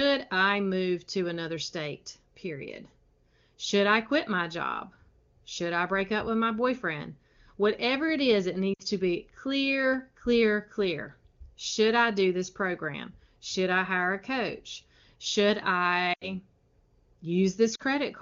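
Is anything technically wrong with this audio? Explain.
Yes. The speech has lost AMR speech frames at 8.73 to 8.82 s, 16.13 to 16.31 s and 17.75 to 17.82 s, gaps of about 60, 80 and 40 ms. When frames fail their checksum, the decoder keeps repeating the last good pitch and vocal tract settings at falling gain. The sound fades to near silence within two frames rather than cutting to hard silence as a plain dropout would. It then returns briefly weak or rough. Between these gaps the wideband codec sounds clear, which fits a high AMR-WB rate.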